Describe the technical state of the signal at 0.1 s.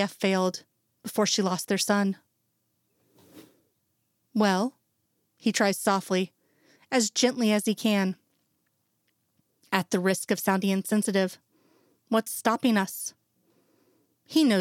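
The signal at 0.1 s is intact, with no fault present at that moment.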